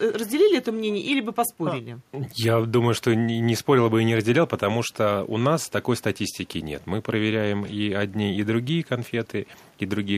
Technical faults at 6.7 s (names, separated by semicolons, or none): none